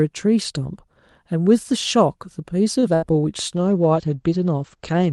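At 2.79 to 2.86 s, a late packet caused a short stall: the jitter buffer ran dry, so the speech holds one sound about 31 ms too long before carrying on with nothing lost. From 2.95 to 3.05 s, a burst of packet loss drops about 80 ms of audio; the receiver stretches and fades the last sound to fill the gap, then the speech resumes further along. From 3.55 s to the end, a call bitrate drop pushes the Opus encoder from 40 to 14 kbps and narrows its bandwidth from 12 kHz to 8 kHz, leaving the speech rougher and more muffled.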